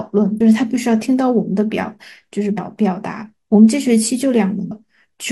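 At 0.36 s, 2.54 s and 4.67 s the speech breaks into a short glitch lasting roughly 40 to 55 ms each time, the classic sign of damaged data in a compressed stream. Some bytes in the encoded file got lost or overwritten, so the decoder misreads those frames, loses its place, and hunts for the next valid frame header before it can pick the audio back up cleanly.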